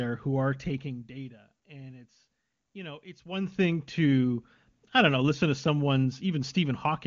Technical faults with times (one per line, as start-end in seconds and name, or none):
none